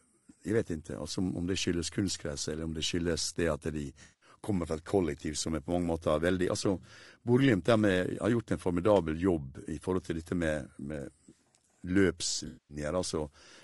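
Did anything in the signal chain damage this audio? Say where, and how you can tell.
Yes, two codec-stage problems. Throughout the clip the speech is rough and grainy. Noise fills the gaps between the pitch harmonics, and the top band sounds thin and synthetic rather than simply rolled off. That points to low-delay AAC compression, likely AAC-ELD at a low rate of around 32 kbps. Its short frames cannot separate the harmonics cleanly, so the grain follows the voice. Broadband hiss would sit under everything instead, and a plain low-pass would only dull the top.

The second problem is AAC frame loss with concealment, in two patches: 4.03 to 4.29 s, just before "kommer fra", covering about 180 ms of lost signal, and 12.47 to 12.76 s, about 220 ms. Neither patch drops to silence or clicks. Each one smears into a noisy, phasey blur, because the decoder rebuilds the missing frames from the last good spectrum with scrambled phase. 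That sets it apart from a network dropout or buffer underrun, which would leave a gap or a discontinuity.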